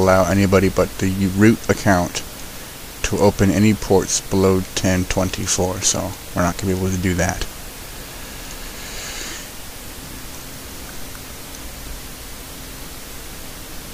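Nothing goes wrong in this one; there's no technical fault to point to at any moment in the audio.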